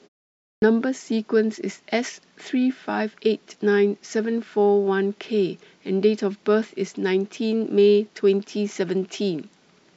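At 0.55 s, after 0.55 s of silence, there is a clipped start after a pause. The dozing output path takes 71 ms to wake, until 0.62 s, so the opening sounds vanish and speech bursts in abruptly. Muted pauses would lose no speech.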